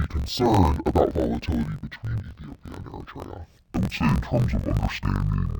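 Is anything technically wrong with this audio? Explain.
Yes. The speech runs throughout with interleaved audio read as planar. Each block of about 21.77 ms holds alternating left and right samples, but its first half is taken as left and its second half as right. Each half is stretched over the whole block, so the speech drops an octave (12 semitones) while keeping its pace. The block boundaries add a dull, robotic buzz at 45.9 Hz.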